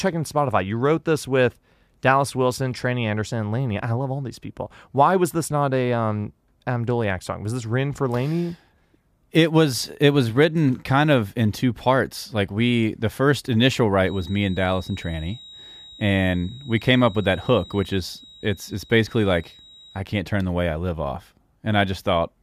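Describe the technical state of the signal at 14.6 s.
At 14.6 s the speech carries a feedback whistle, running from 13.98 to 20.06 s: a thin, steady 3.8 kHz tone well below the speech, likely from a loudspeaker-to-microphone loop held just short of runaway. A spectrogram shows a narrow horizontal line; the waveform barely changes.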